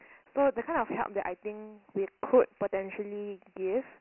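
Throughout the speech, the sound carries Dialogic VOX ADPCM damage: coarse 4-bit adaptive coding leaves a gritty hiss riding on every syllable, and nothing survives above 3 kHz, which fits 6,000-samples-per-second storage at 24 kbps. Lows thin out below about 250 Hz, giving a narrow, telephone-like tone.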